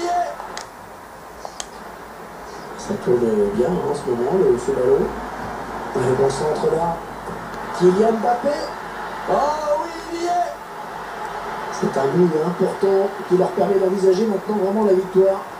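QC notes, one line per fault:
No technical faults were found; the signal level, continuity and timing show no problems anywhere in the clip.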